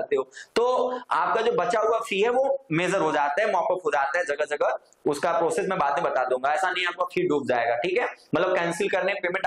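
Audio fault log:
Nothing here gives me any trouble, and I can't point to a single spot in this recording that sounds wrong.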